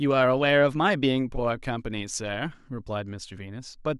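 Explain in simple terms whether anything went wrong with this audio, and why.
Nothing went wrong with this audio, because no fault can be heard anywhere in it.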